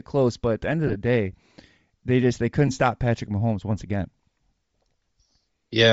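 Across the whole clip the speech carries a breathy, grainy edge in its sibilants and upper harmonics, the sound of Bluetooth LC3 compression, likely at a low rate in the region of 32 kbps. The codec is starving the top of the spectrum, zeroing bands and filling them with noise. On a spectrogram the upper region looks patchy and speckled rather than showing clean harmonic striations, blurred in short time blocks that fit 7.5 ms frames.

From 0.88 to 0.96 s, just after "at the end of", there are lost LE Audio frames: brief dropouts scattered across roughly 75 ms, totalling about 30 ms, which fits four missing frames, none much longer than one frame. The decoder patches each hole by repeating the last spectrum with randomised phase, so the sound turns to a short noisy smear. The waveform shows small, fuzzy, low-detail patches, and the spectrogram shows flat, smeared columns. At 2.68 s, after "they just they", a single lost frame of about 7.5 ms leaves one tiny noisy blip.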